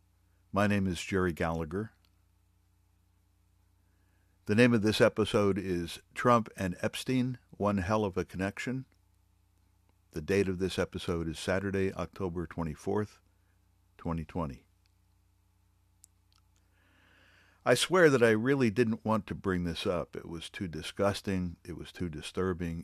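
No technical faults can be heard anywhere in this speech recording, and the signal remains intact throughout.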